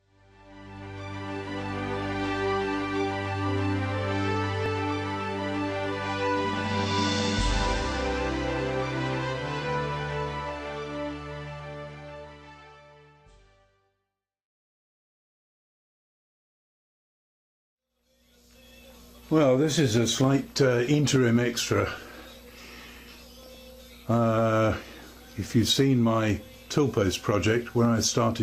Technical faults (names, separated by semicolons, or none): none